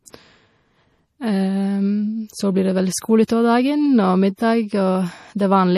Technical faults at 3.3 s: MP3 compression; pre-echo

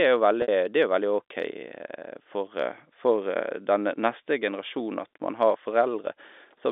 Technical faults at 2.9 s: none

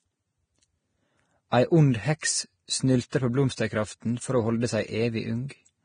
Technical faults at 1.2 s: Vorbis compression

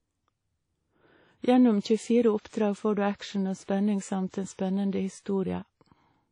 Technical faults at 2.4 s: WMA compression; pre-echo

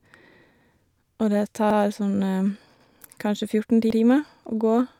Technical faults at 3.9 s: overlapping chunks

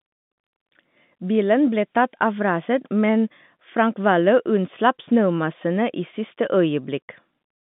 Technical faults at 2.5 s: none

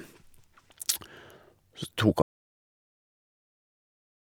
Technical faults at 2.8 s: audio dropout to silence

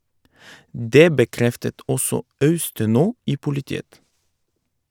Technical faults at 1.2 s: none

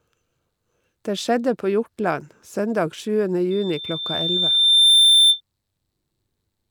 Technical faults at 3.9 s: loudspeaker feedback squeal

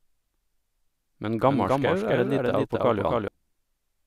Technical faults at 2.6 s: doubled audio track

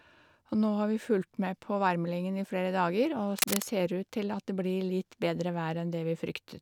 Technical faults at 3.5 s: cable scratch noise

